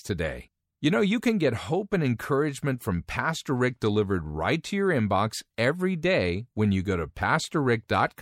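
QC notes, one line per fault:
No faults heard in this speech recording.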